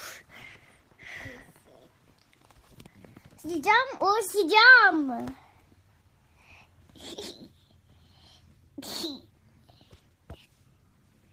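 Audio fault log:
3.97–4.01 s, short concealed packet loss: a brief smear where the sound momentarily blurs before settling again. About 20 ms of audio never reached the decoder in time, so the receiver covered the gap with 21 ms of sound continued from just before, then blended back into the real signal.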